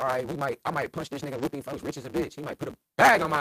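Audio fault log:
throughout: block size mismatch (truncated). A steady buzz near 138 Hz sits under the speech, and everything runs about 1.6 times fast while pitch stays natural. That fits 512-sample writes read in shorter blocks, with each block's tail discarded. A resampling error would shift pitch too.
1.25–1.47 s: lost packet rebuilt from error correction. Just after "I might punch this", the sound turns rougher and noisier for about 120 ms of rebuilt audio across several lost packets. There is no silence or dropout, because low-bitrate backup copies were played in place of the missing audio.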